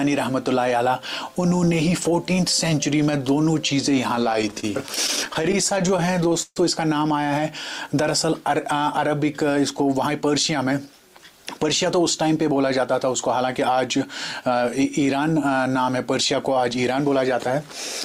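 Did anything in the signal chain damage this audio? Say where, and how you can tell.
Yes. From 4.15 to 6.58 s the sound drags and stutters through 24 brief holds, the longest 138 ms: repeated stalls (stutter), as late network packets kept emptying the jitter buffer.

At 9.74 to 11.86 s (107%) and 16.83 to 17.13 s (112%) the sound hurries at unchanged pitch: jitter buffer speed-up, trimming pitch periods to shed excess delay.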